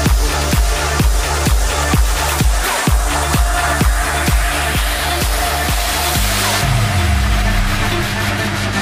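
Mains hum from 6.13 s to the end: the 50 Hz power supply leaks into the signal, leaving a steady low drone nearly as loud as the sound.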